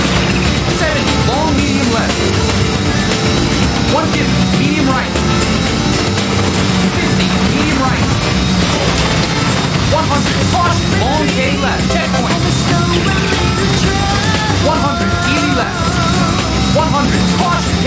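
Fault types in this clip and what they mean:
Gain pumping: The level breathes through the whole clip. The gain is pulled down on every loud sound, swinging by about 5 dB. Loud and soft parts sit close together, squashed. The likely cause is gain set far too high, with a fast limiter pulling it back.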